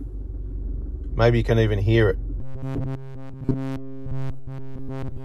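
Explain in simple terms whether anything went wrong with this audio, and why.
Something did go wrong. From 2.40 s to the end at 5.25 s, the sound becomes a stiff, metallic buzz pitched at 134 Hz. This is robotic sound from repeated short buffers. The likely cause is fresh audio arriving too slowly, so a slice of about 7.5 ms keeps being replayed.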